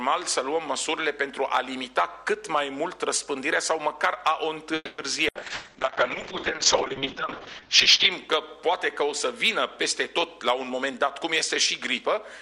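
At 4.75 s the sound stalls for about a quarter of a second, until 5.01 s. The last sound is stretched into a fading buzz, with a brief silence of about 20 ms near its end. Then the audio resumes exactly where it left off. Nothing is lost. The gap is simply inserted, and playback now runs about 230 ms later than before. This is a call audio freeze, and the likely cause is packets held up in transit until the jitter buffer ran dry.

From 5.3 s to 8.18 s there is a call bitrate drop. The encoder falls from 96 kbps to 6 kbps and stays at that floor for about 2.8 s. The audio bandwidth shrinks from 20 kHz to 8 kHz, so the top end disappears. The sound turns muffled, coarse and watery. It only opens up again as the rate climbs back after 8.18 s.

Inside that stretch, playback skips ahead twice. The first jump is at 5.34 to 5.38 s. Somewhat less than a tenth of a second of audio is gone, and the two sides are joined almost directly. 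The second is at 5.41 to 5.45 s, and roughly a tenth of a second vanishes. Each jump pulls playback forward, by roughly 50 ms and then roughly 100 ms. That fits a buffer dropping audio it held in excess after the freeze.

At 5.54 to 5.78 s comes a burst of packet loss. The receiver fills about 100 ms by continuing the last sound and fading it. Then the audio resumes further on, with about 60 ms missing. Around 30 ms of extra filler also goes in, so the delay grows by about 40 ms. The result is a short smeared tail followed by an abrupt resume.

From 6.56 s to 9.78 s there is a jitter buffer slow-down. The receiver repeats tiny slices of the signal to rebuild its reserve. Playback runs at 97 percent speed with unchanged pitch. Over the whole stretch it adds about 102 ms. Sounds are slightly drawn out, and a faint warble may be heard.

There are two jitter buffer speed-ups near the end. From 10.41 to 11.21 s the receiver trims short pieces and plays at 108 percent. 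Roughly 70 ms is removed. From 12.01 to 12.39 s it speeds up to 113 percent and removes roughly 50 ms. Pitch holds steady in both, but the audio sounds hurried. Any regular rhythm is compressed. The buffer is shedding surplus delay here.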